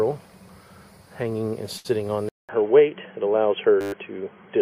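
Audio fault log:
1.77 to 1.87 s, short stall from a late packet: A packet arrived late and the jitter buffer ran dry. The receiver held the last sound for 73 ms until the packet came, then resumed where it stopped. Nothing is lost, but everything afterwards runs 73 ms later.
2.29 s to the end, input switched to a poorer device: A 200 ms silence marks the switch. After it, nothing is heard above 3.3 kHz, so the sound turns narrow and dull. The level shifts by about 5 dB, and new background noise sits roughly 55 dB below the signal. A change of input device is the likely cause.
3.81 to 3.93 s, system hang loop: The system froze while the audio hardware kept replaying one 10 ms piece of its buffer. That piece repeats 12 times. Looping so short a piece at 100 Hz gives a steady buzz. Roughly no audio is lost.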